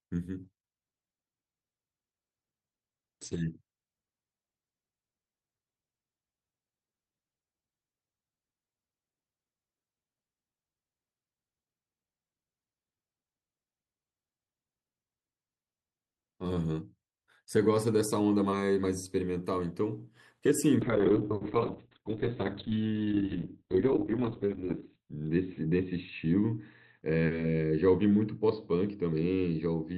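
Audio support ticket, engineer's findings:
Call bitrate drop, 0.44–3.65 s and 20.83 s to end: speech goes rough, muffled. Encoder starved by bandwidth estimate, 40 kbps down to 9, later 6 kbps, holding lowest about 3 s and 4.3 s. Spectrogram: top edge falls from 20 kHz to 8 kHz, then 4 kHz; coarse, smeared texture.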